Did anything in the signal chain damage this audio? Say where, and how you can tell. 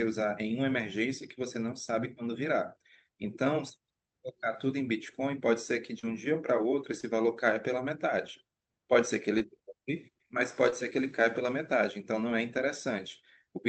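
Yes: short concealed packet loss at the network and jitter-buffer stage, at 5.99–6.05, 7.01–7.05, 9.39–9.42 and 10.70–10.74 s. Each is a brief smear or wobble where 40 ms, then 20 ms, of speech arrived too late, so the decoder extended the preceding sound and blended back.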